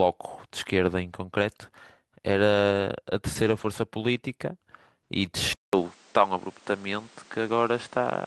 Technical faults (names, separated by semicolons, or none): lost packet rebuilt from error correction; input switched to a poorer device